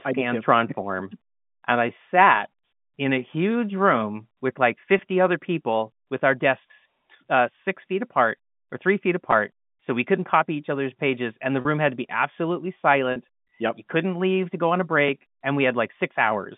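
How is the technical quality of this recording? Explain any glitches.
The recording has four brief dropouts, heard through G.711 A-law telephone coding that confines the sound to about 150 Hz to 3.5 kHz.

Packet loss with pitch repetition occurs at 4.98 s and 9.31 s, each gap about 10 ms, and at 11.61 to 11.65 s and 13.12 to 13.16 s, each about 40 ms. The receiver bridges each gap by repeating the last pitch period. The 10 ms losses pass as a faint held buzz, and the 40 ms losses as a longer buzzy hold before the speech resumes.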